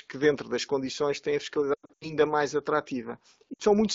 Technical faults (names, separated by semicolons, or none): lost AMR speech frames